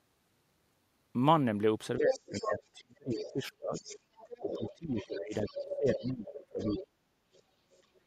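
From 1.98 to 3.86 s the speech is suppressed in double talk. It drops by as much as 30 dB or so, likely because the echo canceller turned both talkers down together. The waveform envelope caves in there, and the spectrogram's upper bands thin out.

The other side's voice leaks through at 2.1–2.63 s, only a few dB under the speech. It leaks again at 3.11–3.31 s and 3.74–6.07 s, about 10 dB down. This is likely residual loudspeaker echo, which shows as a fainter harmonic pattern overlapping the main one.

A second suppression runs from 4.41 to 7.48 s and dips as deep as roughly 35 dB, leaving near-empty stretches in the waveform.

Leakage returns at 6.59–6.82 s, about 10 dB down, and very faintly at 7.72–8.0 s.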